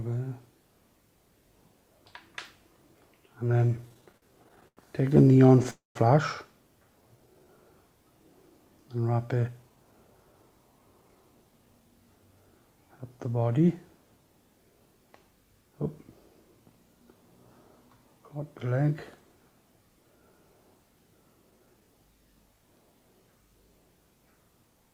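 From 3.51 to 4.79 s there's a stutter of repeated stalls, seventeen little gaps up to 91 ms. Packets kept arriving late, the jitter buffer kept draining, and the receiver padded by stretching the last sound. That's about a fifth of that stretch. The same stutter returns at 5.23 to 5.66 s, with six shorter hitches.

Right after, 5.70 to 5.97 s, comes a call audio freeze: a quarter-second hold, mostly silent, likely from packets held up in transit, before the audio resumes where it stopped.

At 7.02 to 7.52 s a jitter buffer slow-down drags things to about 86% speed, with 82 ms of repeated pitch periods added. The pitch is unchanged, but sounds draw out.

Then 9.33 to 11.81 s flips to a jitter buffer speed-up, running about 11% fast as the buffer trims roughly 0.3 s of surplus. It sounds rushed at the same pitch.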